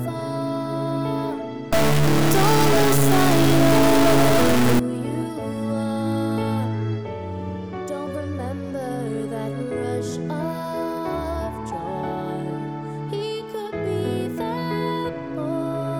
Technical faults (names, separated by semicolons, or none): stuck bit